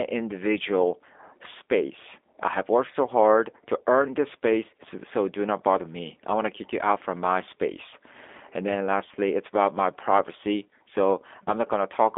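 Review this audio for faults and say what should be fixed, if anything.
The whole clip runs through a G.729 codec, and the damage is plainly audible. Everything is squeezed into a 300 Hz to 3.6 kHz line band, and the rebuilt speech sounds rough and synthetic. That fits an 8 kbit/s G.729A stream rebuilding each frame from a filter, pitch and a few pulses. To fix it, carry the call on a wideband codec such as G.722 or Opus.

Around 11.44 to 11.51 s there's VoIP packet loss concealed by the speech codec. About 30 ms goes missing, which points to a single dropped packet. The decoder fills it by stretching the last pitch and filter into a fading buzzy tone or coloured noise, and the voice stays weak or distorted for tens of milliseconds after. To prevent it, add jitter buffering or FEC, or fix the lossy network link.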